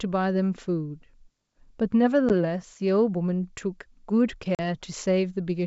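At 2.29 to 2.31 s, a short hole of about 10 ms cuts into the speech. It sounds like roughly one lost packet on an ADPCM call. At 4.55 to 4.60 s, a longer gap of about 40 ms follows, around four packets. Both holes have hard edges. Silence fills the missing audio. After each one, the decoder's predictor and step size no longer match the sender's, so the speech comes back slightly distorted before it settles. The underlying G.722 wideband coding, which fits a 64 kbit/s mode, stays clear up to about 7 kHz.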